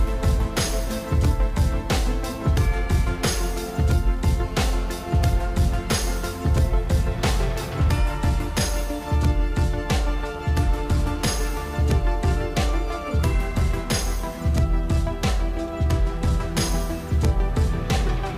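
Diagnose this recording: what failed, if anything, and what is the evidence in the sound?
A hard, raspy buzz cuts in from 4.43 to 5.23 s, about 18 dB below the programme, with a fundamental near 217 Hz and a dense stack of harmonics that has nothing to do with the underlying sound. It holds steady for its whole length. This is GSM phone buzz entering at the analogue wiring stage: a nearby 2G handset on a call transmits bursts 217 times a second, and the audio circuitry rectifies each radio pulse into an audible click train.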